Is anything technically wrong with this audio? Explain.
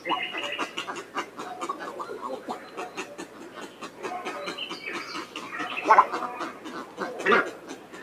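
Yes. A noise suppressor applied to music or sounds runs throughout. Tuned for speech, it treats sustained tones and ambience as noise, so gain swings by around 10 dB. Held material pumps and thins, and the waveform envelope breathes while spectrogram tails fade early.

Sound cut by the noise suppressor occurs at 1.04–1.38 s, 2.4–2.78 s, 3.22–4.01 s and 7.54–7.94 s. In each the suppressor pulls steady or decaying content down by about 5 dB, leaving attacks intact, so the waveform shows sagging sustains and the spectrogram shows dimmed, truncated decays.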